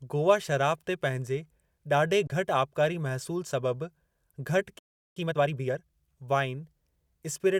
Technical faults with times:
2.27-2.30 Bluetooth dropout
4.79-5.17 playback stall
5.17-5.91 time-compressed catch-up

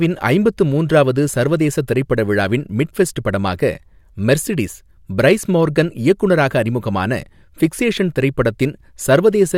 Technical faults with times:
none

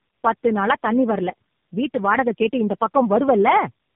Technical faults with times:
0.00-3.96 tandem speech coding

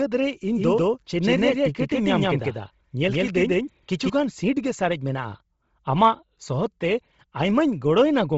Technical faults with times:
0.00-8.38 Bluetooth LC3 compression
0.48-4.10 doubled audio track

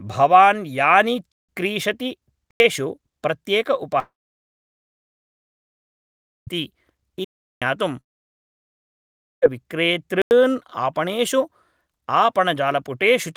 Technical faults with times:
1.32-1.49 block of digital silence
2.51-2.60 block of digital silence
3.99-6.49 long network dropout
7.24-7.62 block of digital silence
8.01-9.44 long network dropout
10.22-10.31 block of digital silence

